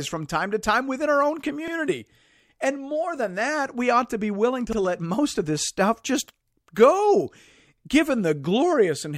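At 1.68 s and 4.73 s, and again at 7.78 s, the speech shows overlapping chunks: it was handled in 3.0 s pieces, each starting 50 ms before the previous one finished. That 50 ms replays at each join, producing a regular stutter.

At 6.75 s there is pre-echo ahead of a sharp onset. The codec spread quantisation noise across a 26 ms block without switching to short blocks, so noise about 19 dB above the quiet lead-in smears 15 ms before the attack as hiss.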